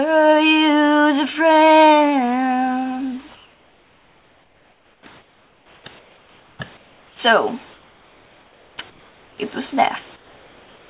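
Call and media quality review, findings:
Comfort noise in place of the background: gaps at 3.35–5.06, 5.18–5.84, 5.99–6.59, 6.77–7.19, 7.73–8.78, 8.90–9.38 and 10.16–10.89 s turn flat, featureless, about 5–8 dB quieter. Likely DTX: the sender paused transmission and the receiver synthesized noise. Band tops out at 4 kHz.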